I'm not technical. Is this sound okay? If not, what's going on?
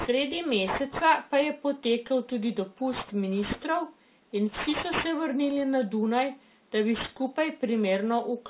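No. Aliasing runs throughout: the speech was converted to a lower quality without filtering, so sounds above 4 kHz fold back as gritty, metallic noise.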